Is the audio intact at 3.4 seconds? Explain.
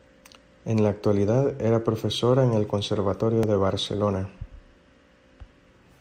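No, there's an overlap between stream segments at 3.43 s: two pieces claim the same moment, the player trims one, and a sliver of speech drops, giving a tiny skip.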